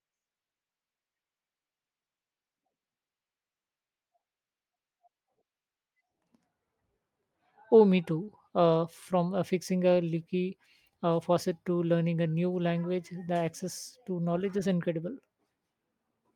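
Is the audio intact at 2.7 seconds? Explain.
Yes, the speech at 2.7 seconds is intact, carried cleanly through the call codec path with its band limit near 12 kHz and nothing breaking up at that moment.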